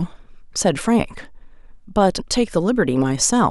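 Damaged data in a compressed stream corrupts one spot in this speech recording, so the decoder misreads a frame and loses sync, producing a brief glitch at 2.18 s.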